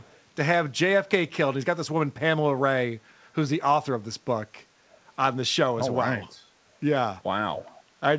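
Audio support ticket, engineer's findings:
Faint, delayed repeat of speech at 0.0–0.2 s, trailing by 356 ms and very low in level. Echo leak, likely far-end loudspeaker pickup that the echo canceller did not fully remove.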